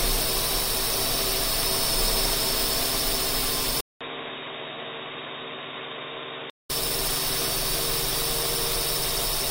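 At 3.81 s, after a 200 ms gap, the sound turns dull and boxy, with nothing above 3.8 kHz, roughly 10 dB quieter and with a new, faint noise floor, until 6.70 s. This is likely an input switched to a poorer, narrower-band device.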